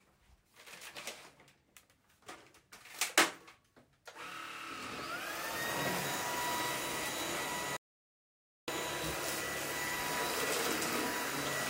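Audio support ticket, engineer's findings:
Audio dropout to silence, 7.77 to 8.68 s. Input signal lost for about 0.91 s, likely a momentary link failure or stray mute upstream of the recorder, which kept writing silence. Sound cuts off abruptly, total silence with no background floor, then resumes mid-flow. Material in the gap unrecoverable.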